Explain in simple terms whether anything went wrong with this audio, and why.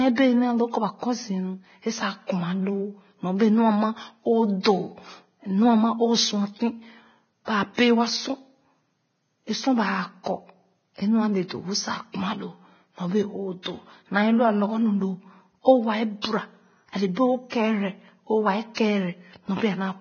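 The speech sounds dull and grainy all the way through. Nothing is heard above 6.5 kHz. Heavy Vorbis compression is the likely cause.

There is also pre-echo, a brief hiss just before sharp sounds. It is heard at 4.61 s after "nyɔbee nu ama o", at 13.62 s, at 16.22 s after "loo o waa", at 17.50 s, and at 18.74 s after "o kɛɛrɛ o waa". Each hiss lasts about 26 to 44 ms. The codec spreads its noise across a block, so it lands before the attack.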